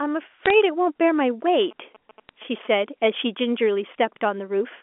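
From 0.45 to 0.50 s, bit errors on a digital phone line cause a brief crackle. Flipped bits corrupt single samples, and hits on high bits or the sign of loud samples tick sharply. From 1.48 to 2.67 s, GSM signalling bursts from a nearby 2G phone leak in. The circuit rectifies them into galloping ticks and 217 Hz buzzes, well below the speech. At 2.29 s, another brief bit error hits one frame.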